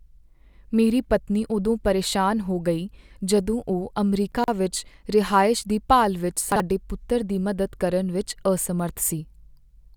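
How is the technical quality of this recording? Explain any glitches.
The recording has two brief glitches, both chunks out of order. At 4.32 to 4.48 s, after "ਹੋ ਗਈ ਜਦੋਂ ਉਹ" and before "ਵਿੱਚ ਰਿਹਾਇਸ਼ ਦੀ ਭਾਲ", a 40 ms piece of audio was delivered late and played after material that should have followed it. The displacement fits roughly three chunks. At 6.52 to 6.6 s, after "ਰਿਹਾਇਸ਼ ਦੀ ਭਾਲ ਵਿੱਚ", a 40 ms chunk is one slot out of place. Nothing is missing, but the misplaced segments create abrupt joins, heard as a jumbled moment.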